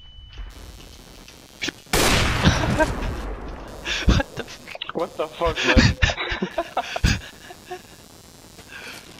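From 0.50 s to the end, computer activity noise: load-driven ground disturbance adds a buzzing chirp pulsing near 150 Hz, seen as vertical spectrogram striations.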